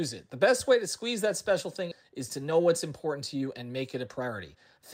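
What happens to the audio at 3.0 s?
Jitter buffer speed-up spans 2.09 to 4.83 s. To drain an overfull buffer, pitch-period slices are cut. Speech runs 11% faster, same pitch, sounding hurried.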